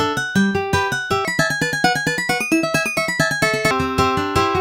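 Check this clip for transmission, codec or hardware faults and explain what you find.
One fault stands out. From 1.25 to 3.71 s there is a section at the wrong speed. It runs 1.66 times fast, likely from playback against a mismatched clock. Pitch rises nearly ten semitones, sounding hurried and high.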